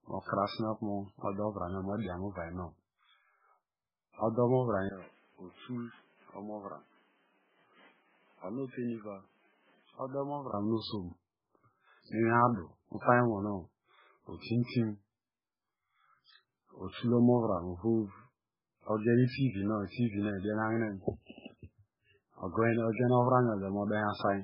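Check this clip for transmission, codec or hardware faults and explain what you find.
Yes, three kinds of fault are present.

Throughout, the speech sounds watery and swirly with heavy damage and nothing above 5.3 kHz, likely from MP3 compression at a very low bitrate, around 8 kbps.

From 4.89 to 10.54 s, after a 20 ms gap, the sound turns duller and about 10 dB quieter, with new background noise well below the speech and nothing above 3.8 kHz. This is likely the input switched to a poorer device with a narrower band.

At 14.39 s and 18.98 s, a short hiss of 54 ms and 59 ms precedes sharp attacks. This pre-echo comes from codec noise spreading across the block before each attack.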